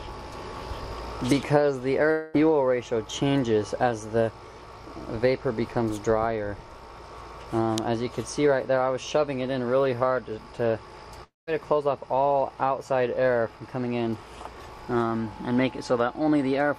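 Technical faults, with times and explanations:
2.11–2.36 s and 11.24–11.49 s, long network dropout: roughly a quarter second vanishes each time, covered by a fading buzz that sinks into silence the second time, likely from lost packets.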